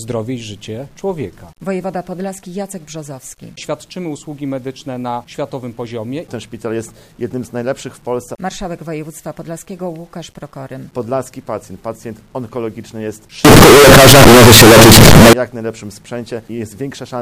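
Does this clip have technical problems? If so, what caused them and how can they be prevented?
Yes. From 13.45 to 15.33 s, the 8-bit samples were likely read with signed and unsigned mixed up. That flips the top bit, so every zero crossing leaps across the whole range. The passage becomes very loud, harsh distortion, with quiet moments as loud as the rest. To prevent it, declare the sample format explicitly at every hand-off, remembering that 8-bit audio is conventionally unsigned.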